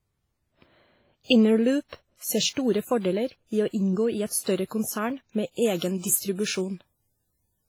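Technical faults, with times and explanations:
Throughout: WMA compression, likely; heavy codec damage with ringing, washy smearing and breathing hiss, fitting about 24 kbps; a spectrogram shows smeared, gappy high bands.
5.62–7.68 s: pre-emphasis left on; a CD-style 50/15 µs treble boost, uncorrected, lifts 10 kHz about 8 dB over 1 kHz, so the spectrogram's upper bands brighten abruptly.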